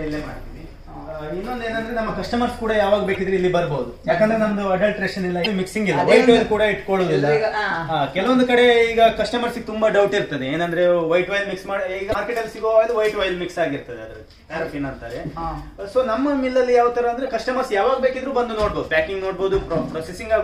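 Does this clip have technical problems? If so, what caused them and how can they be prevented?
Yes. Damaged data in a compressed stream causes brief glitches at 3.14–3.17, 5.42–5.47, 12.11–12.15 and 17.26–17.29 s. Corrupted frames make the decoder misread or lose sync, which shows as short broadband smears or abrupt waveform discontinuities. Checksummed storage and transport with error detection or retransmission would prevent it.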